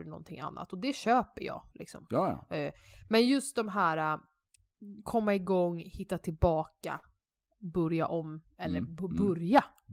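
At 6.97 s, speech breaks off until 7.05 s. This is a burst of packet loss: audio arrived too late or not at all. The receiver extended the last sound for 53 ms, fading it out. Speech then resumes with 60 ms missing.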